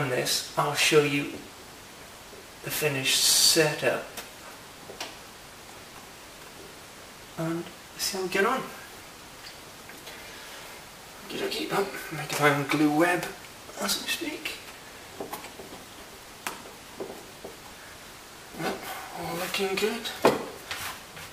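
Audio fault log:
No faults heard.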